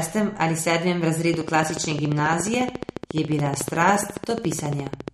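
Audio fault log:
throughout, MP3 compression: The speech sounds watery and swirly, with smeared consonant onsets and nothing above 12.4 kHz, so the top end sounds dull and closed off. This is likely lossy MP3 coding at a low rate, roughly what a 48 kbps stream would give. Starved of bits, the encoder removes the treble above a fixed point and drops weak frequency components that come and go between frames, which causes the shifting, underwater texture.
1.34 to 5.09 s, train of clicks: Just after "ali sedmem", a steady ticking starts and runs nearly to the end. It comes at 14.2 clicks per second with even spacing, about fifty clicks in all, each peaking about 10 dB above the speech, so they stand out sharply and carry on through the pauses. A regular pulse like this likely comes from electrical interference or a faulty connection or power supply injecting the same short spike repeatedly.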